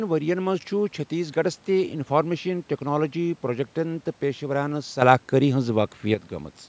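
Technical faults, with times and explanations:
5.02 to 6.14 s, sudden gain jump: speech and background noise leap up together by about 8 dB, hold for about 1.1 s, then drop back just as abruptly, likely from a digital gain change applied between adjacent samples with no ramp.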